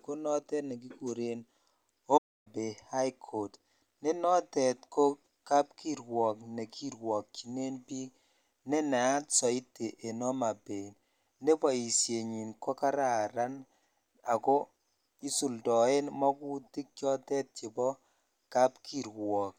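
At 2.17 s the speech cuts to silence for about 0.28 s, resuming at 2.47 s. This playback stall was likely the player running short of data or being blocked. Its length and clean, silent gap set it apart from a brief click or dropout.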